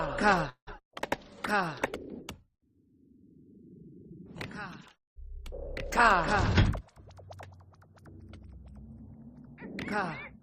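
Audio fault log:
0.49–0.69 s, call audio freeze: packets were likely held up in transit and the jitter buffer ran dry. The last sound is stretched into a fading fill of about 175 ms, including roughly 80 ms of silence, then resumes where it stopped with nothing missing.
0.79–0.81 s, skip ahead: a stretch of roughly 70 ms was discarded while later audio was already queued, so playback jumps forward. The two sides are joined by a tiny 3 ms bridge, leaving an abrupt splice with that slice of sound gone.
2.50–4.14 s, jitter buffer slow-down: with the buffer running low or its target delay just raised, the receiver repeated single pitch periods and pause fragments over and over, adding 72 ms. The audio plays at 96% speed with unchanged pitch, so sounds feel slightly drawn out.
7.04–7.67 s, jitter buffer speed-up: the buffer held more than its target, so the receiver cut short pieces of one or a few pitch periods, removing about 70 ms in total. 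The audio runs at 111% speed at the same pitch and sounds hurried.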